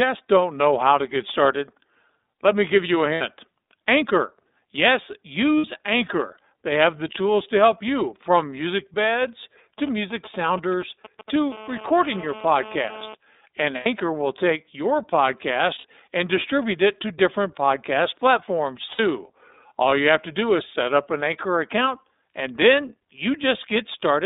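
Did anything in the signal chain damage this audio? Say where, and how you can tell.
Yes. At the codec stage, the whole clip shows iLBC codec damage. The speech is confined to roughly 250 Hz to 3.7 kHz and has a rough, synthetic edge. That texture fits the 13.33 kbps mode with 30 ms frames. It is what separates excitation coding from simple low-pass filtering, which would only muffle the sound.

At the network stage, there are lost iLBC frames at 3.15, 5.58, 13.76, 15.78 and 18.92 s. Each gap lasts 60 ms, except the one at 13.76 s, which lasts 90 ms, consistent with two or three missing frames. These are not silent dropouts. The decoder fills each gap with a held, buzzy vowel-like sound, and the speech is clean again immediately afterwards, because each frame decodes independently.

In the analogue wiring, GSM phone buzz runs from 11.52 to 13.14 s. It is a hard, raspy buzz at 217 Hz with many harmonics, about 17 dB below the speech, and it holds steady throughout, as it would during a call. 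It is not mains hum, because 217 Hz is not a multiple of 50 or 60 Hz. The buzz comes from radio bursts being rectified in the audio circuitry.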